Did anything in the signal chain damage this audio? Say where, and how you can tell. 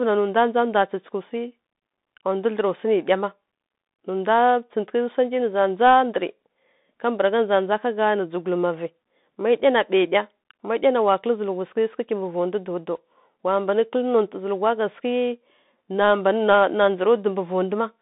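Yes. The damage happens at the codec stage: the speech passed through a Bluetooth CVSD headset codec for its whole length. CVSD sends only one bit per step, up or down, with an adapting step size, which fits a 64 kbps headset link. The sound is confined to roughly 200 Hz to 3.7 kHz, with nothing above 3.8 kHz. Fast, loud high-frequency sounds outrun the step size and distort, s sounds turn scratchy, and a granular hiss sits under the speech throughout.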